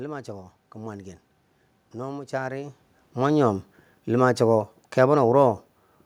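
No technical faults are audible in this recording.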